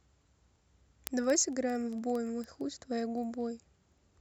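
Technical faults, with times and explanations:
0.10–4.20 s: word clock ticks, sharp clicks about every 50 ms as an unlocked receiver drops or repeats one sample, fitting a clock mismatch of a few hundred ppm.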